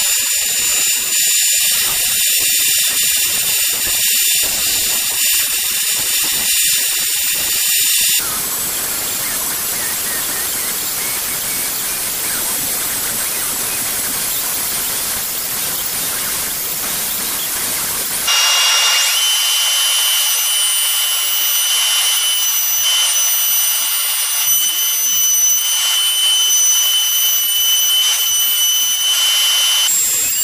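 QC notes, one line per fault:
No technical faults are audible anywhere in the signal, and the audio path holds steady throughout.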